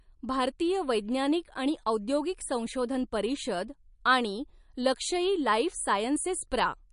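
Speech recording with plainly audible MP3 compression damage from start to finish: nothing is present above 10.6 kHz, and weak spectral detail flickers between frames, giving a watery, swirly texture with chirpy sibilants and smeared onsets. This likely comes from encoding at a low bitrate, roughly 43 kbps.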